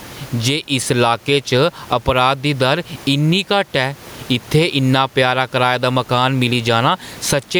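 Gain pumping runs throughout the speech: the gain swings by around 15 dB as it is pulled down on each loud syllable, with the room noise about 33 dB below the speech, likely from input gain set far too high with a fast limiter pulling it back.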